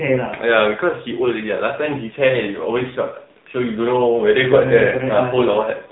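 Throughout, the speech carries AMR narrowband mobile codec damage. Nothing passes above 3.9 kHz. The voice sounds buzzy and synthetic, which fits the 7.4 kbps mode.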